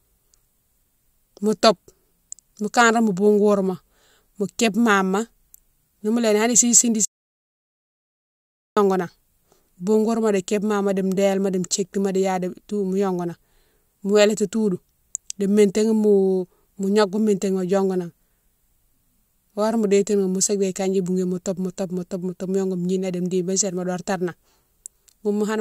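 It's a speech clip with one audio dropout to silence from 7.05 to 8.77 s, a silent 1.7 s gap, likely a lost input or stray mute.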